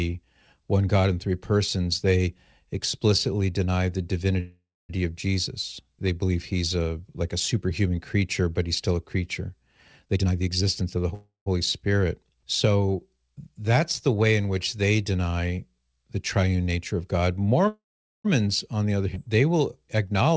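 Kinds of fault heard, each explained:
call audio freeze: The speech stops and is carried on by a fading buzz that sinks into silence, then resumes exactly where it broke off, with nothing lost. This happens at 4.40 to 4.91 s (silent for the last 0.25 s), 11.14 to 11.48 s (0.14 s silent) and 17.68 to 18.26 s (0.44 s silent). The likely cause is packets held up in transit, so the jitter buffer ran dry and the receiver stretched its last sound until audio arrived.
jitter buffer speed-up: The speech sounds rushed but keeps its normal pitch. From 10.05 to 11.12 s it runs at 128% speed, trimming about a third of a second, and from 19.97 to 20.36 s it runs at 111%, trimming about 50 ms. After a backlog built up in the jitter buffer, the receiver cut out many tiny pitch-period slices in quick succession to bring its delay back down.
skip ahead: Around 19.14 to 19.18 s the speech jumps forward with almost no gap, and about a fifth of a second of it is simply gone, with the sound on either side joined nearly directly. 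Later audio was already waiting, so that stretch was dropped, either in transit or when the jitter buffer overflowed, and playback continued from the newer material.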